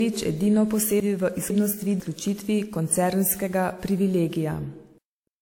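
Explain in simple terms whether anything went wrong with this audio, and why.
Between 1.0 and 2.0 s there are chunks out of order. The audio there is cut into half-second pieces, and one piece plays a step late, after the piece that should follow it. Nothing is missing, but the order is wrong. It sounds jumbled.

The whole clip also has generation loss. The speech sounds swirly, smeared and a bit hollow, and sharp starts of sounds are blurred. This is likely from being compressed and re-saved about five times. Each pass adds its own damage.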